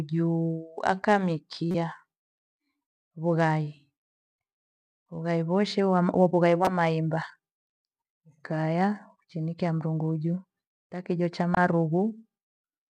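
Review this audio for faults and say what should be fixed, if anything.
Three short glitches cut through the speech, at 1.71 to 1.75 s, 6.65 to 6.68 s, and 11.54 to 11.57 s just after "taa kijo cha". The first peaks at about -15 dBFS and spans roughly one frame. The later two are louder, near -10 dBFS, and cover a couple of frames. This is a corrupt frame decoded: flipped bits in the compressed data went unnoticed, so the decoder rebuilt those frames with wrong gains and codes. That scattered energy across the wrong frequencies. To prevent it, add checksum verification so damaged frames are concealed instead of played.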